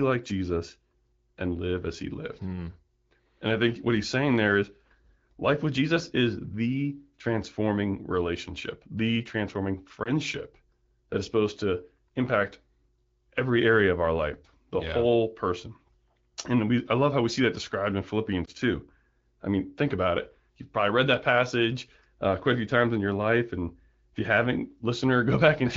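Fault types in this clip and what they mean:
Lost AMR speech frames: at 10.03 s and 18.45 s, a 20 ms gap fitting one dropped frame is patched from the last good frame, heard as a brief dip.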